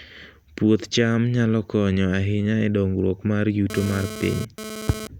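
From 3.70 s to 5.07 s, just after "ahinya e dongruok mar", a GSM phone buzz sits on the speech at about 11 dB below the signal level. A nearby 2G handset, here most consistent with a data transfer, is transmitting in pulses about 217 times per second, and the audio circuitry rectifies that radio energy into the signal path. It sounds like a harsh, rasping 217 Hz buzz, rich in harmonics and unrelated to the speech.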